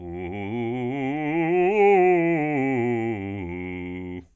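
The music clip has no audible technical fault anywhere in its running time.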